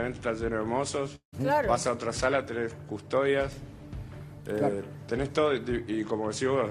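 From 1.15 to 1.34 s the sound smears into a fading buzz, then drops to silence: likely a long network dropout, concealed rather than briefly clipped, with audio resuming past the missing part.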